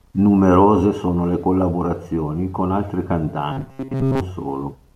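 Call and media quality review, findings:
Robotic sound from repeated short buffers, 3.52–4.21 s. Speech becomes a rigid metallic buzz, 134 Hz. Likely playout underrun looping a ~7.5 ms block for most of it. Spectrogram: flat harmonic comb at 134 Hz multiples. Waveform: identical repeating cycles.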